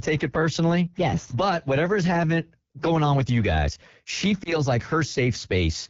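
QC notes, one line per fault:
Throughout: AMR wideband (HD Voice) codec at 8.85 kbit/s, one of its lowest rates. Speech sounds rough and raspy. Content above 6.4 kHz is filled with shaped noise.
4.43 to 4.59 s: lost AMR speech frame, just after "with you guys she". A brief dip or warble, which fits a single lost 20 ms frame. The decoder reused the previous pitch and vocal tract settings at falling gain.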